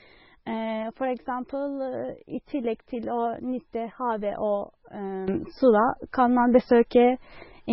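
Throughout, heavy MP3 compression, likely at a very low bitrate near 16 kbps, strips everything above 5.6 kHz and leaves the speech watery and swirling. At 5.28 s a sudden gain jump, likely an unramped level change, lifts speech and background noise together by about 10 dB through to the end.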